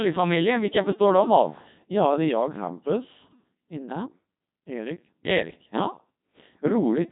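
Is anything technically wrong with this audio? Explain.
Yes. Throughout the speech, the signal has passed through a Codec 2 vocoder at heavy damage, with a sound that fits its 2.4 kbit/s mode. The encoder discards the waveform and transmits only pitch, voicing, energy and a coarse spectral envelope; the decoder then rebuilds the voice from sine waves. The result is robotic and buzzy, with nothing above 3.8 kHz, so the speech sounds synthetic and band-limited.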